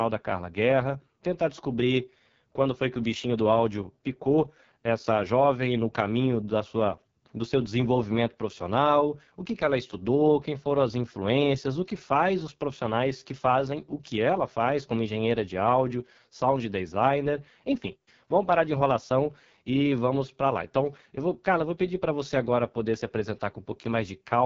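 Throughout, AMR wideband (HD Voice) codec damage makes the speech rough and raspy, fitting its lowest 6.6 kbit/s mode; unlike narrowband telephone audio, content reaches 7.4 kHz.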